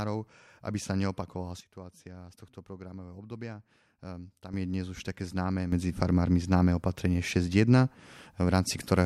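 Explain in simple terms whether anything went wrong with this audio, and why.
A sudden gain jump hits at 1.61 s: everything, background noise included, drops noticeably quieter at once until 4.53 s. A second one at 5.72 s makes it all abruptly louder through the end. The likely cause is a volume change applied instantly instead of smoothly.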